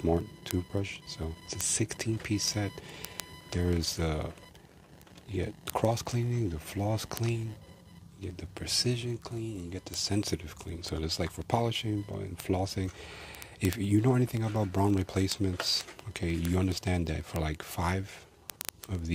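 Word clock ticks run from 0.13 s to the end, roughly 25 a second, as an unlocked receiving clock drifts by around 700 ppm and keeps dropping or repeating single samples.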